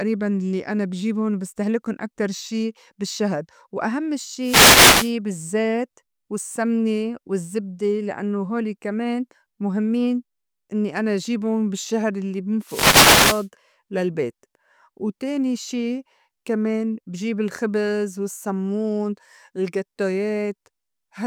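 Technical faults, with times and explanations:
4.41–5.14 s and 12.63–13.48 s, wireless microphone noise hit: twice the analogue FM radio link fades as reflected signals cancel, so receiver noise rises. Each event is a burst of static lasting under a second, about 0.7 s and 0.8 s.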